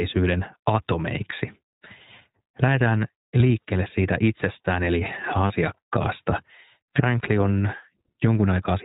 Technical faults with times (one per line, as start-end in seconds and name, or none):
0.00-8.85 iLBC codec
3.38-3.41 lost iLBC frames
5.48-5.52 lost iLBC frames